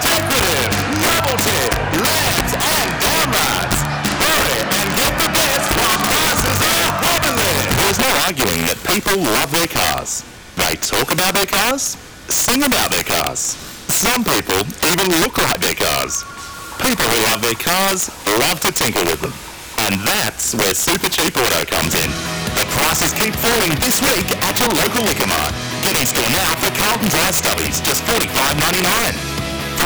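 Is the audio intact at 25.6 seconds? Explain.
No. At 25.6 seconds, as throughout the clip, the sound suffers integer overflow. The signal is driven about 5 dB past the integer limit, and instead of being held at full scale, each peak that crosses it wraps around to the opposite extreme. Only a few percent of samples go over, but each one produces a violent crack on loud moments, harsher than clipping. On a waveform, peaks jump abruptly from top to bottom. A spectrogram shows sharp, full-band vertical streaks.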